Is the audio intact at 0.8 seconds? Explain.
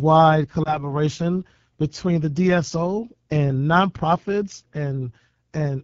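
No. Between 0.64 and 0.91 s the speech briefly dips and warbles, then returns weak or rough for a moment before settling. This is lost AMR speech frames, and the short disturbance points to a single missing 20 ms frame. Radio errors corrupted that frame, so the decoder discarded it and filled the gap by repeating the last good pitch and vocal tract settings at reduced gain. The extra roughness afterwards is the decoder recovering its state.

Over that same stretch, as in the rest of the clip, the voice has a rough, raspy texture. That comes from the AMR wideband (HD Voice) codec at a low rate, which fits 8.85 kbit/s. The codec models the voice up to 6.4 kHz with a pulse-excited vocal tract filter and fills the band from 6.4 to 7 kHz with shaped noise. At this rate too few bits describe the excitation, so the damage is plainly audible.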